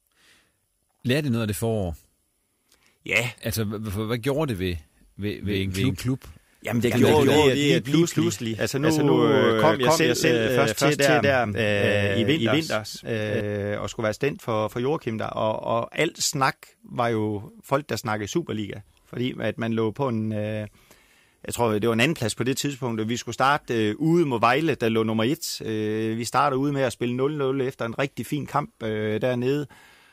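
From 5.43 s, right after "gjorde det ved ved", until 13.41 s, just before "og skulle være stand", the speech carries a doubled audio track: a second full-band copy trails the original by roughly a fifth of a second at about the same level, likely from the signal being captured again through a slower path. Unlike an echo or reverb, the copy has no decay or room colour, and it switches on and off abruptly.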